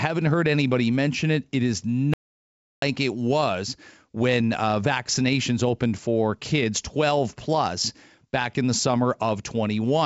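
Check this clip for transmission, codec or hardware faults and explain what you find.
There's one real fault here: a playback stall from 2.14 to 2.82 s, so the speech just drops out for about 0.69 s mid-flow and then carries on. That gap sounds like the player likely ran dry of buffered data, or its output thread got held up, leaving nothing to send to the output until it caught up. The top end stopping near 7 kHz is just the G.722 wideband coding, not a fault.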